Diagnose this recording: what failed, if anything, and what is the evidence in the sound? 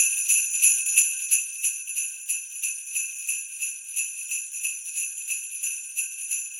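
Between 0.85 and 1.96 s the sound drops by roughly 10 dB in a short run of ticks, about three per second, each a small click riding on the audio. This is zipper noise from the gain stage, at the driver or buffer level: the level is changed in unsmoothed 3 dB jumps, so each abrupt step becomes a waveform discontinuity.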